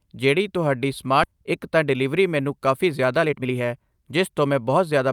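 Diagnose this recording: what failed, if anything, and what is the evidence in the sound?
The network and jitter buffer stage failed. At 1.23 to 1.25 s the speech jumps forward in a skip ahead: roughly a second of audio is missing, and the two sides are butted together with no silence or concealment filling the join. A packet-loss dropout would leave a gap or a smeared, concealed stretch. Here the buffer held about a second too much and discarded it outright, cutting the delay by about that amount in a single step.

From 1.34 to 5.09 s a jitter buffer speed-up follows. The speech runs at about 113% of normal rate, hurried but at unchanged pitch, and about half a second is removed in total. The receiver is still working off excess buffered audio by cutting short pitch-period-sized pieces many times in succession. A sample-rate mismatch would raise the pitch along with the tempo. The pitch staying put points to time compression in the buffer.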